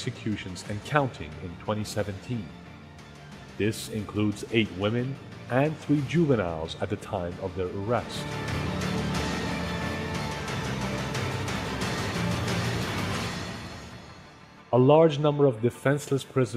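No faults turn up anywhere in this one, so there's nothing to flag from beginning to end.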